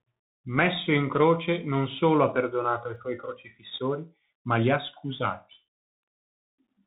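The speech has passed through a Bluetooth CVSD headset codec, a one-bit, step-adapting narrowband coder that fits a 64 kbps link. Nothing above about 4 kHz survives, s sounds turn scratchy, loud bright moments distort, and a grainy hiss sits underneath throughout.

At 2.96 s, between "solo ha perdonato ai" and "suoi crocifissori ma li", the waveform jumps abruptly forward, likely from dropped samples, a handful lost in a fraction of a millisecond. Nothing audible goes missing; instead a single sharp click cuts through.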